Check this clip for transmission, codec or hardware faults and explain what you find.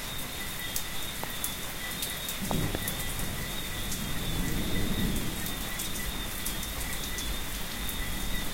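Two loud pops stand out. Loud pop at 1.24 to 1.26 s, then a double loud pop from 2.51 to 2.77 s. A voltage step, likely from a plug, switch, static or driver glitch, enters the chain. It is heard as a sharp thump about 15 dB over the sound, then two more peaking about 20 dB above it, with the sound continuing underneath.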